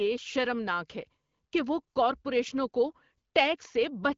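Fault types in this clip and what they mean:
Nothing here stands out as a fault; the speech comes through the AMR wideband (HD Voice) path at 12.65 kbit/s just as that codec normally sounds.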